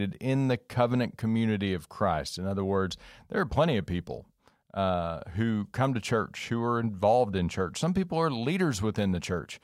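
Nothing technical stands out in this speech recording; there's no fault to point to anywhere in it.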